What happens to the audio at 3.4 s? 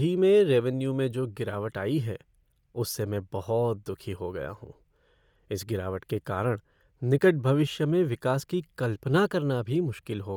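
At 3.4 s the speech carries a breathy, grainy edge from what is likely Bluetooth LC3 compression, present for the whole clip. It fits 10 ms frames at around 48 kbps, with upper bands replaced by noise fill.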